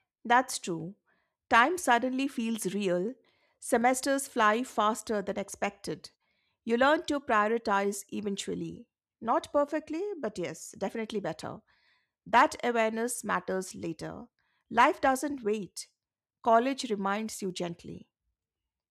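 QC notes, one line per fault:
No faults heard anywhere in this speech recording.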